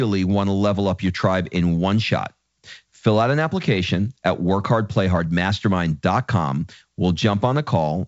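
Nothing stood out on listening to this speech, which comes across as ordinary wideband telephone audio carried by G.722 coding at 64 kbit/s.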